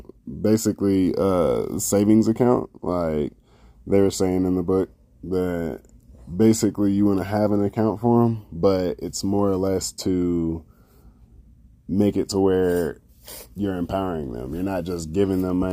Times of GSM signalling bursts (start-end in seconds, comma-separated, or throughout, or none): none